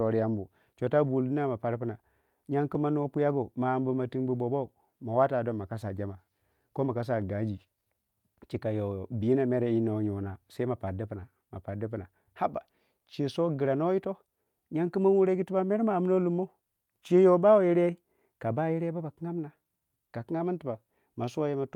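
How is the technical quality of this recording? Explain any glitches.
The recording has a timing fault that runs through the whole speech clip, showing up as a string of small, uneven hiccups rather than any loss of level or bandwidth.

Clock drift between sender and receiver: the sending side's audio clock runs roughly 2% slow against the receiver's. The jitter buffer keeps draining, so playback has to stretch the material to avoid running dry. The result is a slightly dragging, unsteady pace across the clip.

Repeated timing corrections: from 0.32 s to 21.26 s the receiver keeps repeating short fragments to stay in step, playing the stretch at about 98% speed and adding around half a second in total. Each insertion is tiny, heard as a faint stutter at irregular intervals.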